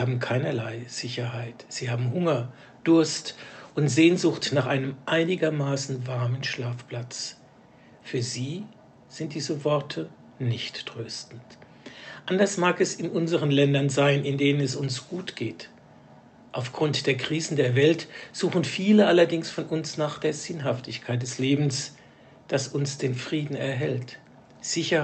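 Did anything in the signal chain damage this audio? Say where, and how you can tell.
No, nothing stood out on listening: the audio came through a normal call path, and its top end stops at about 8 kHz, as expected from an Opus connection at that bandwidth.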